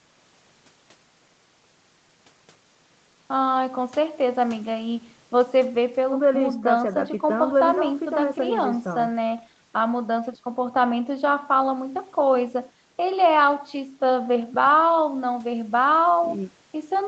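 This speech recording has nothing technically wrong with it, and its content reaching only up to about 8 kHz is expected for a call.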